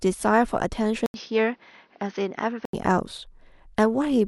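Speech clip where, from 1.06 to 2.73 s, the sound turns duller, a little quieter and noisier after an 80 ms gap, likely an input switched to a poorer device. A spectrogram shows content ending flat at 6.4 kHz, with the waveform briefly empty at the switch.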